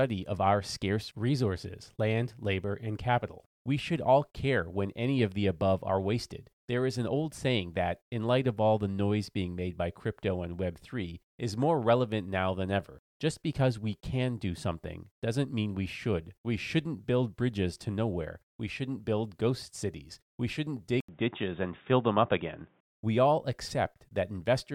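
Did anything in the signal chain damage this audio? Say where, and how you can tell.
Yes. At 21.00 s the input stage changes, likely from the input switching to a poorer device, until 22.88 s. An 80 ms gap of silence marks the switch. After it the speech turns dull and boxy, with nothing above 3.8 kHz, and a new noise floor sits roughly 40 dB below the signal, while the level stays about the same. On a spectrogram the upper bands vanish at a sharp horizontal ceiling. The waveform shows a brief flat gap, then similar amplitude.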